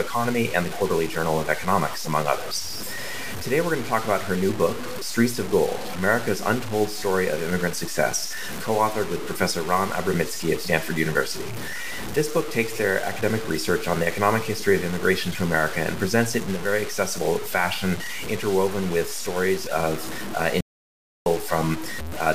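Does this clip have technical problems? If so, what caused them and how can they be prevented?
Yes. Throughout the clip the sound is coarse and grainy, with a harsh, buzzy distortion that follows the signal's level. It is most noticeable on quiet passages, which crackle or collapse to nothing. This is low bit depth without dither, likely from truncating to very few bits, which fits about 5. The rounding error sits only roughly 10 dB below the signal and is locked to it. Keep audio at 16 bits or more, and add dither whenever word length must be reduced.

From 20.61 s to 21.26 s the sound cuts out abruptly into silence with no room tone. It returns just as suddenly, and about 0.65 s of material is gone. This is an audio dropout to silence, likely caused by the input briefly disconnecting or failing while the recorder kept writing silence. Secure cables and connections, use reliable links, and monitor input levels during recording so gaps are caught immediately.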